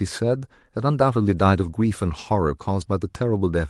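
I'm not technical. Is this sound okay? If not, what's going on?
No. There is a lost packet rebuilt from error correction at 1.63 s. A scrap of the speech went missing, and a rougher backup copy carried in the next piece filled the gap, so that instant sounds briefly grainier.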